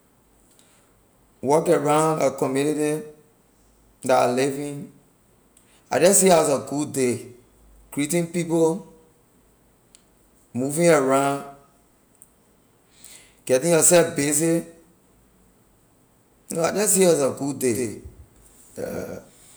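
A second, slower capture path or a misaligned edit has likely mixed the same speech recording in twice: from 17.73 s to the end, a doubled audio track appears abruptly, with a full-band copy trailing around 150 ms behind at roughly 5 dB lower, giving a dry, stuttering echo without any room decay.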